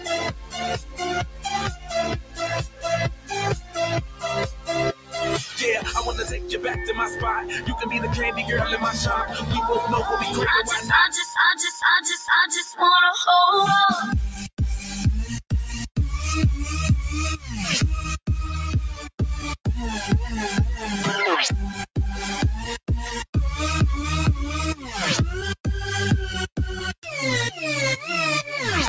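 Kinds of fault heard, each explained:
Noise suppressor applied to music or sounds: a speech-oriented suppressor treats steady and decaying material as noise, so the level swings by around 10 dB throughout.
Sound cut by the noise suppressor: held or fading sound sinks, by up to about 15 dB in the opening 5.9 s, with briefer dips of about 6 to 11 dB later.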